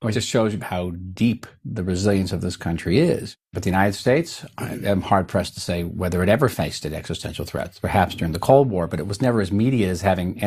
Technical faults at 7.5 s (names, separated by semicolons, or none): none